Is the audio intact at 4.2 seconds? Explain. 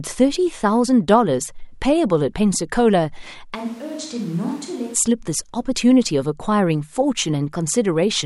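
No: a switch to a distant microphone runs from 3.56 to 4.93 s. The sound turns roomy and thinner, roughly 10 dB quieter with more background noise, likely because the close microphone dropped out.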